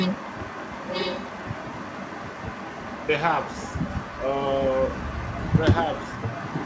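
From 0.00 to 3.09 s a delayed copy of the speech sits about 1.0 s behind it, roughly 10 dB down. This is an echo leak, likely from a loudspeaker at the far end whose echo canceller let some of the picked-up signal return. The echo fades to about 15 dB down from 3.41 to 5.61 s, then rises to only about 5 dB below the speech from 5.84 s to the end.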